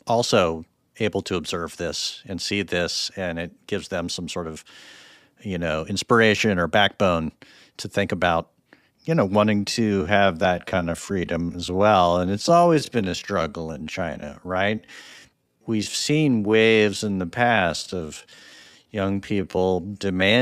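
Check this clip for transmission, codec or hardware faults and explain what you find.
One fault: a time-stretched section from 9.57 s to the end, slowed to about 0.65× speed. Likely software stretching repeats short pieces to hold pitch, so the speech drags; a spectrogram shows elongated, blurred harmonics.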